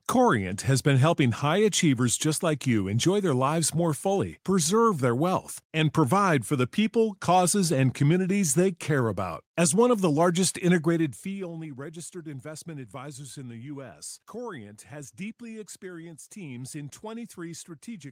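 Nothing technical stands out in this speech clip; there's no fault here to point to.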